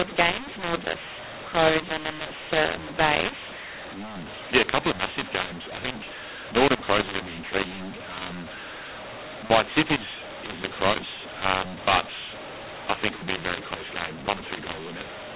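Mu-law and A-law mixed up, throughout: mu-law telephone coding is decoded as A-law, scrambling sample levels, so speech sounds harsh and distorted and pauses fill with noise within the 4 kHz-limited band.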